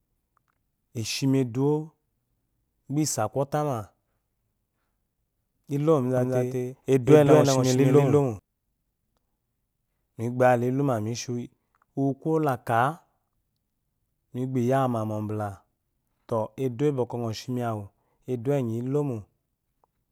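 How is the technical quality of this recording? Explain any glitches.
There's one glitch to flag. From 6.17 to 8.39 s the speech has a doubled audio track: a second copy, about equally loud, trails around a fifth of a second behind, likely from a slower capture path. It snaps in and out abruptly, with no room tail.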